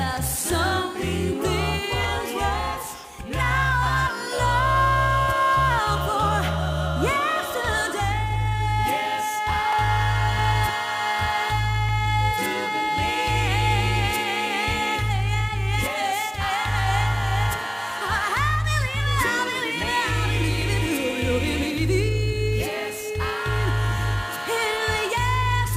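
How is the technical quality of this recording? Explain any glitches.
Seven isolated clicks mark the recording, each consistent with dropped samples, at 2.04, 3.04, 5.98, 9.73, 11.89, 19.39 and 20.62 s. Each is a single sharp tick, showing as a thin vertical line across the spectrum. The likely cause is a gap of under a millisecond in the sample stream, so the waveform leaps straight to a later value. That step is too short to remove any audible sound, but its abruptness produces the click.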